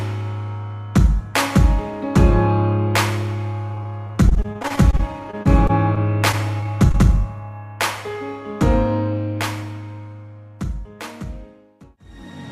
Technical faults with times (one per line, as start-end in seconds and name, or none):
3.69-6.96 repeated packet loss (robotic sound)